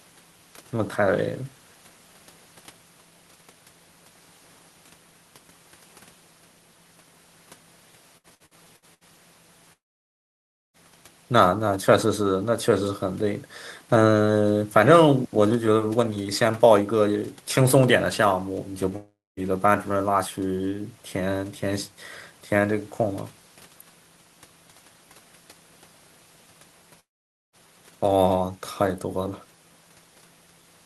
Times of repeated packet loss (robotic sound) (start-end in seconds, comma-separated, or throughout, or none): 8.17-9.04